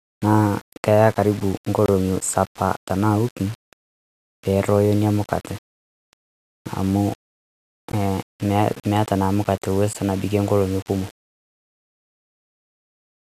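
Throughout, the speech sounds grainy and gritty, worst on quiet syllables, with noise roughly 25 dB below the signal. This is likely low bit depth without dither, fitting 6-bit rounding. On a spectrogram, the noise tracks each syllable rather than forming a steady floor.

Gaps at joins of encoded pieces cut the sound at 1.86 to 1.88 s (24.5 ms), 7.92 s and 9.93 s (16 ms each). Separately encoded pieces were joined untrimmed, leaving encoder padding in place. Each gap appears as a thin blank strip across all frequencies with smeared edges.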